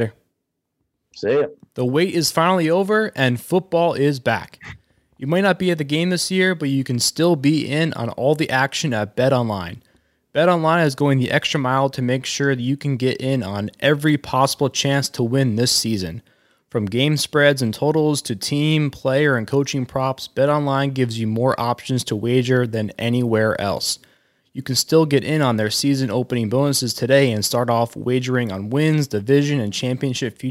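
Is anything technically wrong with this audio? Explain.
No, nothing is technically wrong.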